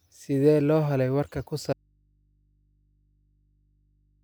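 At 1.73 s, right after "loo helay warka ku", the speech drops out abruptly to a faint hum about 40 dB down. The audio dropout to a faint residue lasts to the end. It likely comes from a lost signal into a still-live input. The waveform collapses to a thin trace, and the spectrogram keeps only low hum lines.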